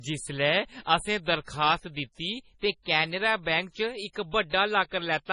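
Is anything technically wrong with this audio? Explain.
Yes. Throughout, the speech sounds heavily watery and swirly, with nothing above 10.6 kHz. That is likely MP3 compression at a bitrate near 24 kbps, which drops weak frequency lines frame by frame and cuts the treble.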